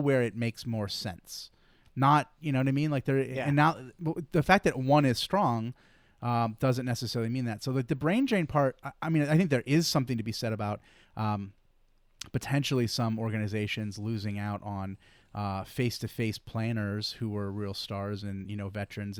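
A speech recording with a resampler restarted on every block throughout: each 20 ms block was converted separately, so its edges carry small errors, heard as a 50 Hz buzz only while speech is present. The sound points to a 48 kHz to 44.1 kHz conversion. A spectrogram shows faint vertical lines every 20 ms during speech, and the waveform shows tiny steps at those block boundaries.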